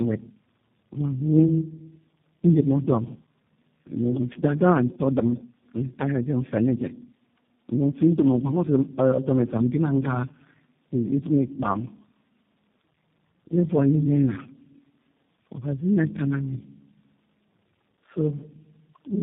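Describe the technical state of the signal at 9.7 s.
At 9.7 s, as through the whole clip, the speech shows tandem speech coding. It sounds like three low-rate speech coders in a row, each re-encoding the previous one's output, so the roughness, muffling and warble compound beyond what any single coder produces. Nothing is heard above 3.6 kHz.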